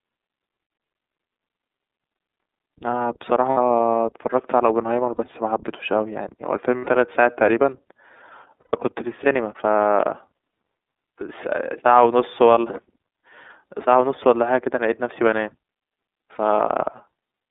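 Speech squeezed through the iLBC codec, with the line band running roughly 250 Hz to 3.7 kHz and a plainly rough, slightly synthetic edge that fits the 13.33 kbps, 30 ms frame mode. You'll also catch lost iLBC frames at 3.51 s (60 ms), 5.16 s (30 ms), 6.78 s (90 ms), 8.61 s (120 ms), 12.54 s (30 ms) and 16.35 s (30 ms), each a short, buzzy held vowel where the decoder repeats the last pitch cycle until the signal snaps back.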